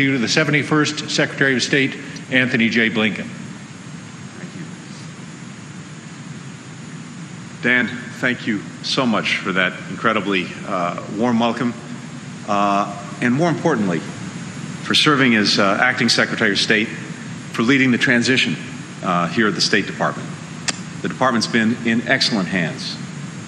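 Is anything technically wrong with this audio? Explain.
Yes. Damaged data in a compressed stream produces brief glitches at 2.16 s, 7.80–7.82 s and 18.69–18.71 s. Corrupted frames make the decoder misread data and lose sync, giving short chirps or blips. Each appears as a thin vertical broadband streak on a spectrogram and a sudden waveform discontinuity.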